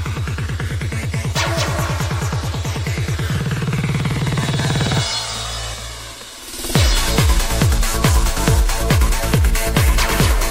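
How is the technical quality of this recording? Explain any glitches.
No technical glitches can be heard anywhere in the recording. There are no interruptions or disturbances in the audio at any point.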